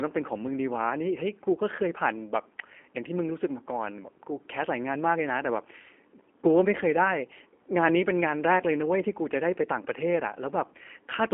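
G.729 coding throughout this speech clip: the voice is rebuilt from a vocal tract filter and sparse pulses, sounding rough and synthetic, band-limited to 250 Hz–3.4 kHz, which fits an 8 kbit/s codec.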